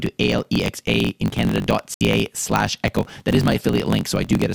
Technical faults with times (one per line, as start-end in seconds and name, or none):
0.00-4.54 block size mismatch (truncated)
0.99 dropped samples
1.70 dropped samples
1.94-2.01 digital broadcast dropout
3.15 dropped samples
4.05 dropped samples